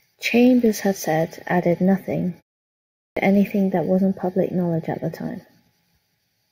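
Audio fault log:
3.06 s, clipped start after a pause: after a silence of about 0.72 s, the opening of "anything that wasn't public" is cut off. Roughly 106 ms is lost. The output path dozed in the gap and needed time to wake. The phrase bursts in abruptly, missing its first sounds.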